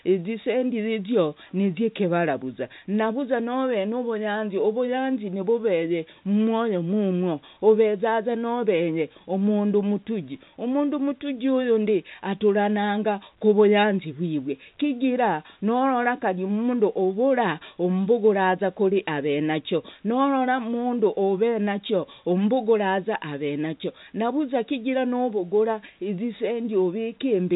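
Nothing goes wrong anywhere in this stretch of speech; it simply carries the narrow band of G.711 telephone coding, with nothing above about 3.8 kHz getting through.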